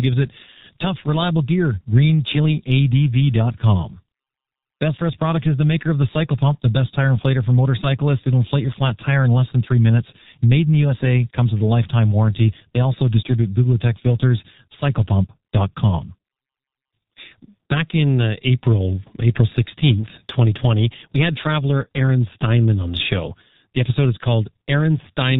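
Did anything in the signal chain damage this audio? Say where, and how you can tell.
Yes, at the codec stage, and the damage runs through the whole clip: this speech has been through G.723.1, the low-rate internet-telephony codec. Nothing reaches above 4 kHz, so consonants blur and the voice sounds muffled and hoarse, consistent with a rate near 6.3 kbit/s. The voice model updates only once per 30 ms frame, which smears fast transitions. A spectrogram shows a hard ceiling at 4 kHz and coarse, blocky harmonic detail.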